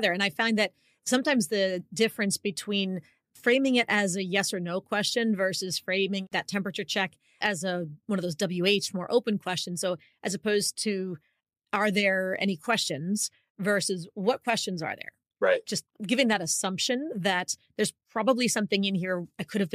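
No technical faults are audible.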